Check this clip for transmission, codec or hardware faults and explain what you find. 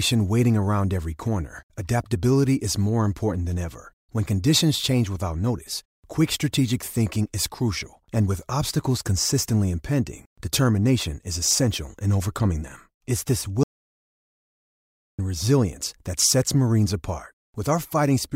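One fault: an audio dropout to silence from 13.63 to 15.19 s. The input was likely lost, through a disconnected device or failed link, while recording continued writing silence. The speech cuts off abruptly into about 1.55 s of dead silence with no room tone, then resumes mid-flow at "resilience that sets".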